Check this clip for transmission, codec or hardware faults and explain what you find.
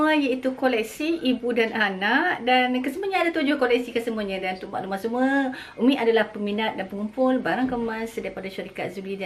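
No transmission, codec or hardware faults.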